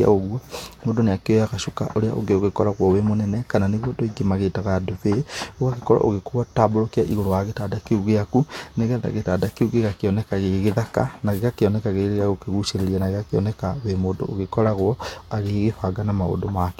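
Listening to this speech recording, nothing stood out as a technical fault at any point.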